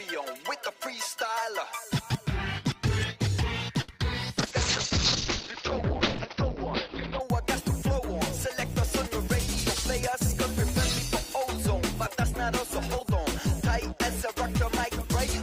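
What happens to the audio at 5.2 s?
At 5.2 s the sound sits inside a call bitrate drop from 4.38 to 7.27 s. The encoder starves, turning coarse and watery, with the treble cut from 20 kHz to about 6 kHz (consistent with roughly 10 kbps). Unlike packet loss, nothing drops out.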